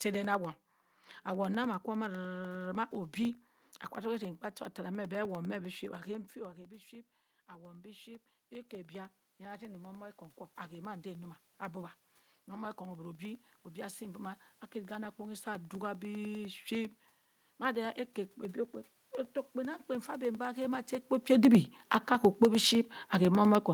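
From 0.14 s to the end of the clip, periodic USB or driver dropouts recur every 0.1 s as the driver or bus stalls and brief gaps are filled with silence. The resulting ticks stay strictly regular and vanish in pauses, which sets them apart from random crackle or clipping.

From 7.48 to 16.49 s, automatic gain rising follows an input drop of about 18 dB. The gain climbs gradually by about 14 dB, and room noise swells along with the speech. The talker moving at around 6 s and 20.5 s changes level without lifting the background.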